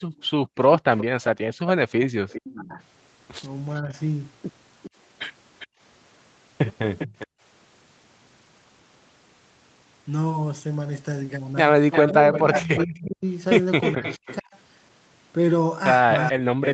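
A speech recording from a call shows echo-canceller trouble in three forms. Background gated by the echo canceller hits twice, between 0.0 and 0.53 s and between 5.67 and 7.41 s. For roughly a third of a second each time the room sound falls by about 37 dB, which appears on the waveform as flat near-silent notches and on the spectrogram as blank vertical gaps. An echo leak follows the voice from 0.21 to 7.27 s at a 401 ms delay, about 15 dB down, and again from 11.92 s to the end at 308 ms, about 10 dB down. The spectrogram shows fainter, shifted copies of the speech harmonics, likely residual loudspeaker pickup the canceller failed to remove. Speech suppressed in double talk pulls the talker down by around 15 dB between 2.55 and 3.96 s, then by around 40 dB from 12.07 s onward. The waveform envelope is chopped and shrunken there, likely because the canceller confused overlapping talk with echo.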